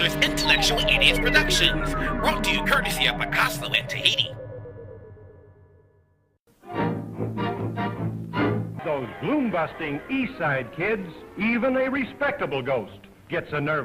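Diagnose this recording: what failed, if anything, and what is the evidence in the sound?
Nothing failed; no stage shows any audible fault.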